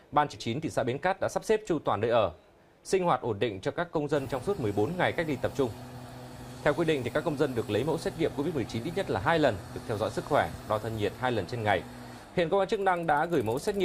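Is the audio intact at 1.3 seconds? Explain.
No. A jitter buffer speed-up runs from 0.49 to 1.45 s: the receiver repeatedly trimmed pitch-period slices to shed about a tenth of a second of backlog, so the sound plays about 10% faster at unchanged pitch.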